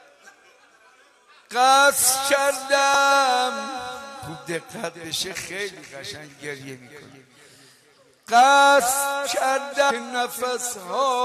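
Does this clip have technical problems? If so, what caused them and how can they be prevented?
Yes. Damaged data in a compressed stream causes brief blips at 2.94 s and 9.90 s. The decoder misreads corrupted frames and resyncs. Use checksummed, error-protected transfer to prevent it.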